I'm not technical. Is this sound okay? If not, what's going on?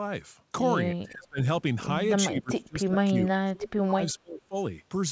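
No. From 0.94 to 1.39 s, and again from 2.27 to 4.55 s, the speech sinks sharply in level or breaks up. This is speech suppressed in double talk: likely the call's echo canceller turning this talker down while the other side spoke.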